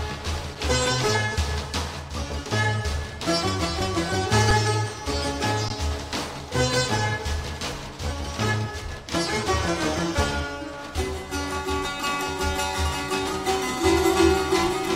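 At 4.51 s the sound briefly freezes. This is an underrun with held sample. The output buffer ran dry, and the converter held its last value for about 5 ms. That gap fits a 256-sample buffer. At 5.69 s the same fault returns, this time lasting 16 ms. Each time the waveform sits flat at its final level, so the sound simply stops with little or no click. Little or no audio was lost, and playback picks up where it paused, so each dropout ends softly.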